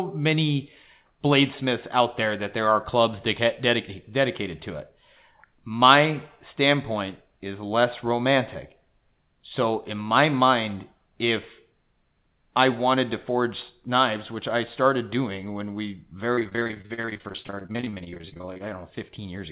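From 16.34 to 18.62 s the speech turns choppy and robotic, with dozens of short holes, none longer than 40 ms. This is repeated packet loss: nearly half the stretch is patched by stretching the last sound, and the 4 kHz ceiling fits a narrowband G.711 call path.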